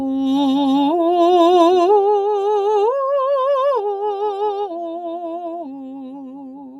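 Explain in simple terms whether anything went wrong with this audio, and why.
A noise suppressor built for speech was left on this music throughout, treating sustained notes and reverb tails as noise, so they dip modestly and the sound pumps.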